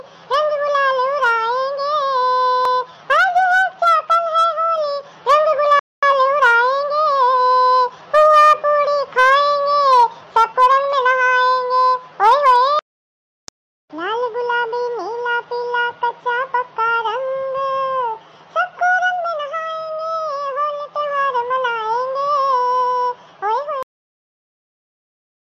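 At 5.79 s the sound stops dead in mid-flow and stays silent for about 230 ms before resuming at 6.03 s. This is a playback stall, most likely the player running short of data or its output thread being held up until it could recover.

From 6.03 s to 8.33 s the audio runs hurried but at its normal pitch. This is time-compressed catch-up: the player trims tiny slices and cross-fades across the joins, playing about 1.1 times faster to clear the backlog from the stall.

At 23.83 s the sound breaks off abruptly in the middle of a sound and falls straight to digital silence, with no decay, for the rest of the clip. This cut-off end means the final buffers were never written out or played.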